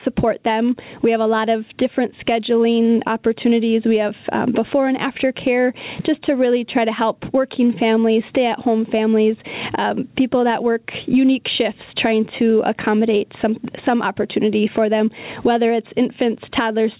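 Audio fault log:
Throughout: gain pumping. The level swings by roughly 15 dB, likely from input gain set far too high with a fast limiter pulling it back on every peak, leaving the speech squashed.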